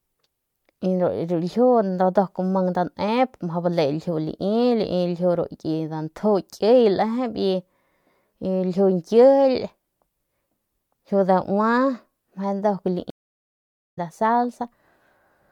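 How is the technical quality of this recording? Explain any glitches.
The recording has one clear glitch, a stream reconnect. From 13.10 to 13.99 s the speech drops to silence for 815 ms, because the connection broke and a fresh decoder restarted mid-stream. It resumes about a second further on, fading in. The waveform and spectrogram show a flat, empty gap, then a jump in content.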